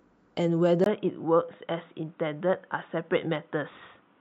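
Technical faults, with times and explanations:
0.84 s to the end, input switched to a poorer device: the input has likely jumped to a different, lower-grade microphone path, with a brief gap of about 20 ms at the changeover. After that the speech carries nothing above 3.8 kHz, so it turns dull and boxy and loses its crisp consonant detail. Loudness stays roughly the same, but a new background noise sits well under the voice, around 45 dB down.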